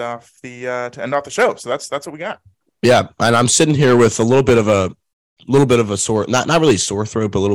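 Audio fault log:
1.14–1.45 s, 2.84–4.82 s, 5.54–6.73 s, hard clipping: speech peaks exceed the available range by about 4, 10 and 9 dB, so they are cut flat. The waveform shows squared-off tops, the spectrogram shows high harmonic smear, and the audio crackles on peaks in the mildest run and sounds harsh and fuzzy in the heavier ones.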